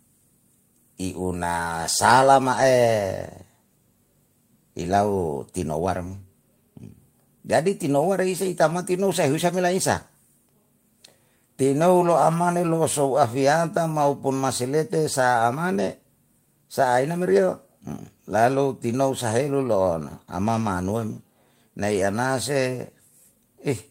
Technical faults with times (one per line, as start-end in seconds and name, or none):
none